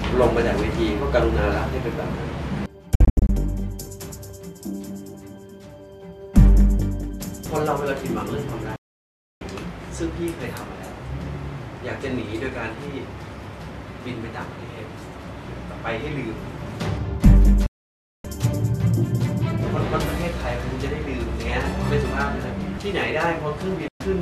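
Digital broadcast dropout: the receiver mutes with quick fades at 2.95 s (broken holes over about 0.34 s), 8.76 s, 17.66 s and 23.88 s as frames fail, so that audio is lost.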